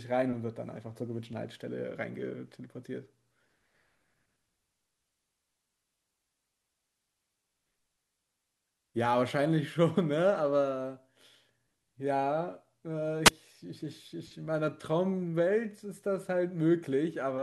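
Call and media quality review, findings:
Wireless mic squelch dropout at 13.25–13.30 s: hiss swells, then about 11 ms of muting as the receiver squelch closes on a faded RF signal.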